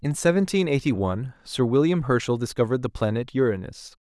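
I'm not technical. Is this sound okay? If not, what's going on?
Yes, this speech recording is okay. Nothing in it points to a technical problem that needs explaining.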